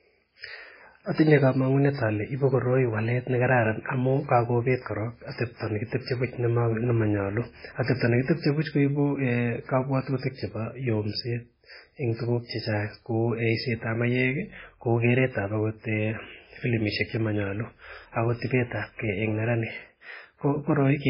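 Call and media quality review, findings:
Speech throughout: nothing above 5.3 kHz, heavy watery swirl, smeared attacks. Likely MP3 compression starved of bits (fits about 16 kbps), dropping the treble and weak spectral lines.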